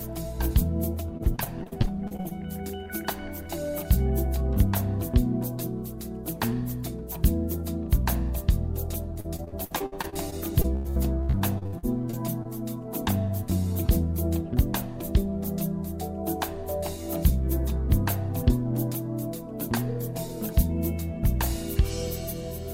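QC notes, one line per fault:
1.17–2.40 s, repeated packet loss (robotic sound): about a dozen short dropouts, the longest around 43 ms. The receiver patches each hole by extending the preceding audio, so about a quarter of this span is synthetic fill. The result is choppy, with pieces missing.
9.20–12.47 s, repeated packet loss (robotic sound): around twenty dropouts, the longest about 89 ms. Roughly a quarter of the span is concealed in the same way. The result is choppy, with pieces missing.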